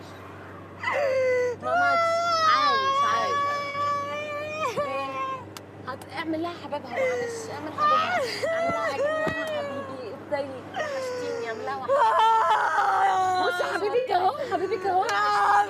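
At 3.69 s and again from 13.98 to 14.10 s, AAC frame loss with concealment leaves brief smeared, phasey patches where the decoder rebuilt missing audio from the preceding spectrum. The gaps, about 43 and 85 ms, fit roughly two and four lost frames. Unlike a hard dropout, neither falls silent.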